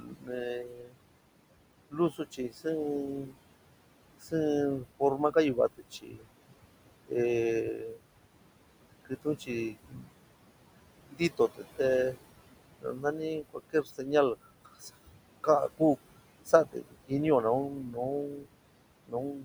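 Noise suppressor artifacts run through the whole recording. The suppressor pulls the room noise, which sits about 12 dB under the speech, down by about 21 dB in the gaps and lets it rise under the talking.

Speech cut by the noise suppressor occurs from 0.0 to 0.97 s, from 1.9 to 8.01 s, and from 9.05 s to the end. Soft consonants and word endings are treated as noise and dropped by up to about 22 dB, totalling under a second, then about 1.5 s, then about 3 s, so they sound swallowed.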